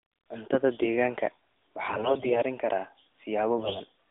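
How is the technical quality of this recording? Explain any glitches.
The recording has two bursts of AMR bit errors on a narrowband phone-band signal, with everything above roughly 3.6 kHz gone.

AMR bit errors hit from 1.86 to 2.41 s and again from 3.58 to 3.79 s. A weak link flipped around 7 and then 10 percent of the less-protected bits, so the codec's pulses and fine gain and spectrum values land wrong, and pitch and level hold while the speech turns hoarse and gargly.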